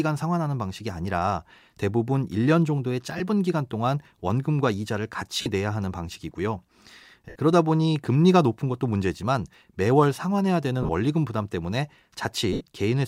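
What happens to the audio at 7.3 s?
At 7.29 s there's a run of lost LE Audio frames lasting about 67.5 ms, to 7.36 s, which points to roughly nine missing frames. The LC3 decoder papers over the gap by replaying the last good spectrum with its signs scrambled, so the speech turns into a brief noisy smear rather than a hard dropout. Because the gap runs past the first few frames, that smear fades down toward silence before the audio picks back up.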